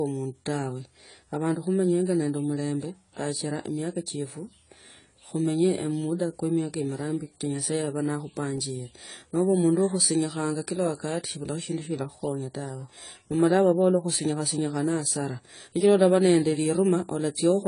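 From start to finish the speech carries plainly audible damage that is likely AAC compression at a low bitrate, consistent with AAC-LC around 24 kbps. Nothing sounds above 10 kHz, so sibilants lose their air and the sound turns dull, while the coarse quantisation adds a warbling, fizzy smear to sustained sounds. A simple low-pass filter would dull the top just as much but leave the remaining spectrum clean, without this unstable, swirling texture.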